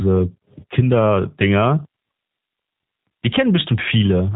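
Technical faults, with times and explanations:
Throughout, G.729 codec: the speech is rebuilt from a vocal tract model and a few pulses per frame at 8 kbit/s. Nothing above 4 kHz survives, and the rebuilt speech sounds rough and synthetic.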